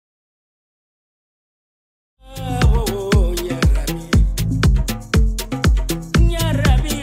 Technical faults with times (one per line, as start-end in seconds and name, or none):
none